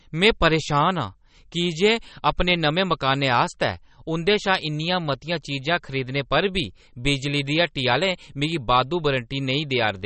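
The speech runs from start to finish with plainly audible codec damage, most likely from MP3 compression at a low bitrate, with the band-limiting and damage fitting roughly 32 kbps. Nothing is present above 8.4 kHz, where the encoder has cut the treble to save bits. Below that, weak frequency components are discarded and return from frame to frame, giving a watery, swirling texture, metallic chirps on sibilants and smeared consonant attacks.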